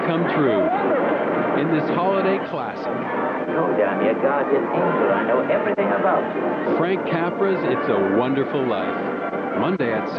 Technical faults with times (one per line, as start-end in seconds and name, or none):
none